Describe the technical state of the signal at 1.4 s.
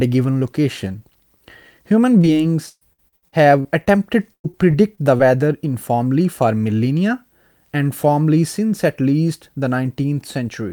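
At 1.4 s the speech signal is intact, with no dropout, distortion, glitch or other technical fault audible at that point.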